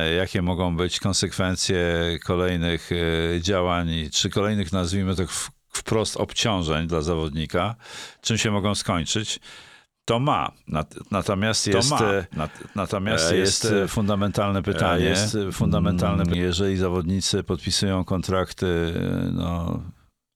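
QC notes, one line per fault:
11.72–16.34 s, doubled audio track: a second full-band copy of the speech runs roughly 1.5 s behind at about equal level, with no decay, starting and stopping abruptly, likely from a slower second capture path. The spectrogram shows overlapping, time-shifted speech patterns with hard edges.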